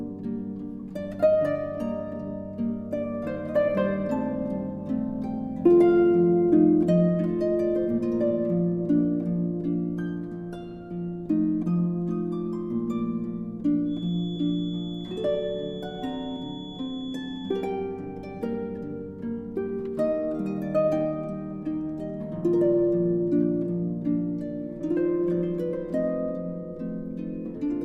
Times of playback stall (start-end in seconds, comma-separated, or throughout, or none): none